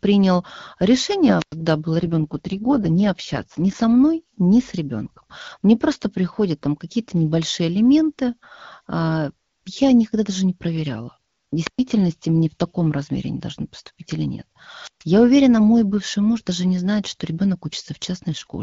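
A short burst of hiss, then a hole of near silence of about 100 ms, comes at 1.36 to 1.55 s before the voice returns. This is a wireless microphone squelch dropout: the analogue FM signal faded far enough that the receiver's squelch muted its output. The same rise of static and gap recurs at 11.62 to 11.81 s, with a mute of about 118 ms, and at 14.82 to 15.04 s, with one of about 136 ms.

From 2.02 to 3.76 s the speech turns rougher and more synthetic, with no gap and no narrowing of the band, and then clears. That is an AMR rate drop. The wideband codec, whose sound fits 12.65 kbit/s, was pushed down to a rate that fits 6.6 kbit/s so that bits could go to error protection on a weak link, leaving too few for the voice. The same raspy texture returns from 18.30 s to the end at 18.62 s.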